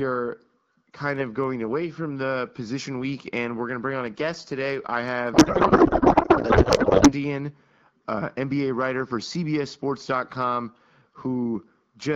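Codec payload misread, 5.33 to 7.13 s: octet-aligned AMR seemingly read as bandwidth-efficient scrambles the fields, so speech becomes garbled, warbling noise barely following it.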